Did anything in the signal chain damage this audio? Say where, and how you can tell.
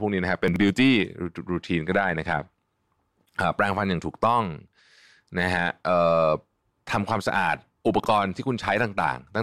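Yes, twice the speech gets chunks out of order, which points at the buffer or network stage. At 0.48 to 0.56 s a 20 ms chunk plays three chunks late, and at 8.0 to 8.06 s another lands two chunks late. Nothing goes missing, but each spot sounds briefly jumbled, with three hard joins where mismatched waveform edges butt together. Late-arriving 20 ms packets being played out after their successors would do exactly this.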